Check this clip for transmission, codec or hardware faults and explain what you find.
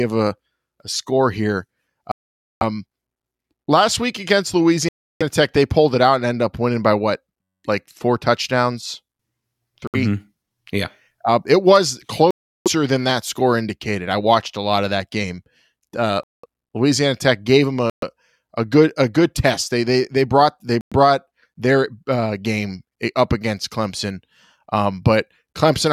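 Two kinds of fault are present in the speech: seven Bluetooth stalls and one system hang loop.

Bluetooth stalls occur at 2.12–2.63 s, 4.89–5.23 s, 9.87–9.96 s, 12.31–12.68 s, 16.23–16.46 s, 17.90–18.04 s and 20.81–20.93 s. Each leaves a clean gap of 65 to 496 ms, after which speech resumes. These are likely radio stalls: interference delayed packets until the receiver's buffer emptied. On a waveform each gap is a flat line, and on a spectrogram a blank vertical band.

A system hang loop runs from 7.42 to 7.64 s. A 10.67 ms fragment repeats 20 times, which fits a 512-sample buffer being replayed while the host was frozen. About a fifth of a second of speech is lost. It sounds like a 93.8 Hz buzz. The waveform shows one identical short shape tiled end to end, and the spectrogram shows evenly spaced horizontal harmonic lines at multiples of 93.8 Hz.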